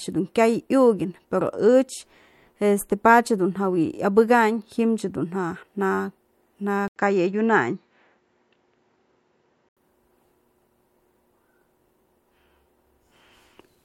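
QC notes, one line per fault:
6.88–9.77 s, input switched to a poorer device: after an 80 ms silence the speech turns duller, with nothing above 7.6 kHz and a faint new background noise, while the overall level stays about the same, then clears at 9.77 s, likely from a switch to a narrower-band microphone.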